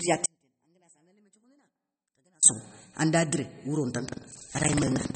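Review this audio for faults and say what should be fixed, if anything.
Throughout, watery, swirly speech with nothing above 8.4 kHz, likely from MP3 compression at a rate near 32 kbps. The spectrogram shows a flat ceiling and flickering holes. Re-encode from the original at a higher bitrate.

From 0.26 to 2.43 s, an audio dropout to a faint residue leaves about 40 dB less signal. The waveform collapses abruptly, then returns before "sokhou anda diré wouro". The likely cause is a lost input, so secure the connection or stream.

From 4.04 s to the end, after "sokhou anda diré wouro", buffer tearing produces a 21.5 Hz robotic buzz, which fits a 2048-sample buffer. Roughly a fifth of each buffer replays audio about 150 ms old, visible as periodic hard joins. Keep the writer and reader pointers synchronised.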